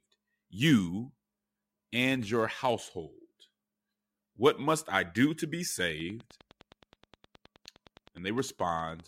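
From 5.79 s, just after "I do to be", a train of clicks runs to 9.01 s: about thirty near-identical pops at a regular 9.7 per second, roughly as loud as the speech. It is likely interference from nearby equipment or a faulty connection or power supply.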